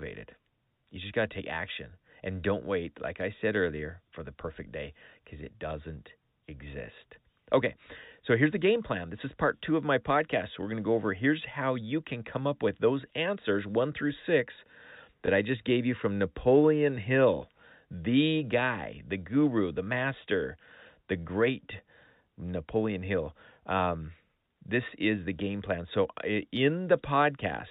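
Speech over a G.711 telephone-band path, with one instance of packet loss with the last packet repeated at 15.26 to 15.28 s: a 20 ms span, which fits a single lost packet, is filled by replaying the previous chunk. Unlike a dropout, there is no silent gap, just a small blip from the single repeat.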